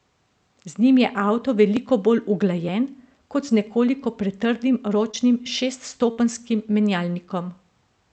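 At 1.77 s, just after "njim je avto", and again at 2.68 s, at 3.67 s just after "kot z", and at 5.46 s, the capture side most likely failed to collect its samples before the hardware overwrote them. This is a dropped buffer (overrun). Each time a few milliseconds of the speech are discarded and the two sides are spliced together with no gap. The result is a slight forward jump in the speech.

From 5.11 to 5.15 s, about 20 ms of the call failed to reach the decoder in time. This is short concealed packet loss. The receiver filled the hole by extending the preceding sound for roughly 19 ms and then blended back into the real signal. The patch is heard as a brief smear or wobble rather than a gap, and the tiny slice of speech it replaced is simply absent.

From 6.11 to 6.19 s, a burst of packet loss removed about 60 ms in a row. The concealment stretched the last sound across roughly 57 ms while fading it down, so a voiced sound becomes a short held buzz and an unvoiced one a dwindling hiss. 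Speech then resumes further along, with the material in between skipped. Throughout, the call codec's band limit near 8 kHz keeps the top end dulled.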